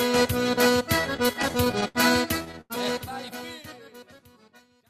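From about 1.01 to 1.97 s there's a run of repeated stalls, a proper stutter. Packets kept showing up late, so the jitter buffer ran dry ten times in under a second, and each time the receiver held the last sound going until data caught up. That's 164 ms of filler in total, about 17% of that stretch, with the longest gap at 68 ms. Nothing is actually lost, but the audio drags and hiccups unevenly.

Then at 2.61 to 2.72 s, while the smooth fade-out that starts around 2.5 s is underway, there's a short stall from a late packet. One packet missed its slot, so the buffer emptied and the receiver stretched the last sound for 88 ms before carrying on from exactly where it left off. It comes across as one sound hanging a beat too long, with a faint buzz or dip in it, and nothing is skipped.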